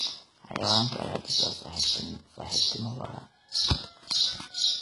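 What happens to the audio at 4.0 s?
At 4.0 s the speech carries the same HE-AAC compression heard throughout: sibilants sound gritty and metallic, with nothing above about 11.1 kHz. The likely cause is spectral band replication copying lower bands upward at roughly 12 kbps, which gives synthetic rather than simply dulled treble.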